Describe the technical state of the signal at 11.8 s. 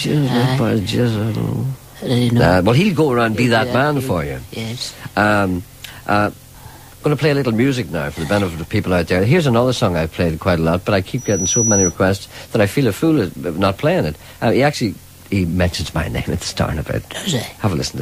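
At 11.8 s you're right in the middle of a loudspeaker feedback squeal, which runs from about 11.18 to 11.96 s. A mic is hearing the speaker it feeds, and around 5.9 kHz the loop gain tips past one, so that tone keeps feeding itself. It swells up over roughly a third of a second into a thin, piercing whistle sitting about 5 dB above the rest of the sound, and then it drops away once the loop is broken.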